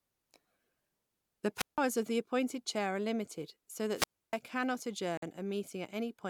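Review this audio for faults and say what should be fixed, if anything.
Two wireless microphone squelch dropouts break the speech. The first runs from 1.56 to 1.79 s, just before "of the appointed chair", with about 163 ms of muting. The second runs from 3.94 to 4.38 s, right after "limited so", with about 295 ms muted. Each time the FM signal fades and hiss rises. Then the receiver's squelch shuts the output until the signal recovers. Better antenna placement or a shorter transmitter-to-receiver distance would prevent these.

At 5.17 s the sound cuts to 50 ms of silence and then carries on. This is likely a Bluetooth stall, where interference delayed packets and the headphone buffer ran empty. Moving the link away from competing 2.4 GHz traffic would help avoid it.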